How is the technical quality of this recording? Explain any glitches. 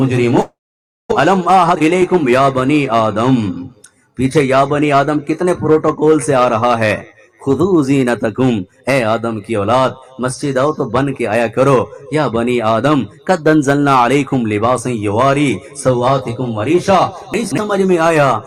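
The recording has three glitches: a long network dropout near the start, a jitter buffer speed-up right after it, and chunks out of order near the end.

From 0.41 to 1.13 s, the audio stream likely stopped arriving for a long stretch, which makes this a long network dropout. The receiver filled the 0.7 s gap by extending the last sound it had, so a fading buzz or hiss is heard first. About 0.55 s of the gap is left as silence. When the sound returns, roughly 0.4 s of material has never been played, and the playback delay has shifted by around 300 ms.

From 1.33 to 3.24 s there is a jitter buffer speed-up. After the dropout, the buffer held more audio than it aims to keep. To bring the delay back down, the receiver repeatedly cut out short slices one or a few pitch periods long, removing roughly 300 ms in total. The pitch stays the same, but the sound runs about 14% fast and feels rushed.

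From 17.34 to 17.58 s there are chunks out of order. A 60 ms chunk was delivered late and plays three chunks after its proper place, behind audio that should have followed it. No audio is missing, but the sequence is scrambled. There are three hard joins where the chunks meet, and the moment sounds briefly jumbled.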